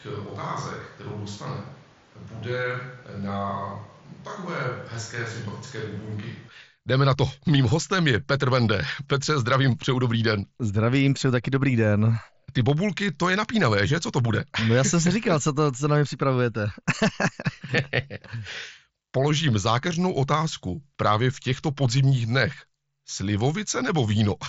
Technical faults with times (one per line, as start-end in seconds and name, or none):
0.00-6.48 switch to a distant microphone